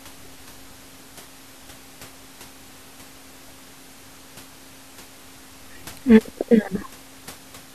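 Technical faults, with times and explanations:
No technical faults are audible.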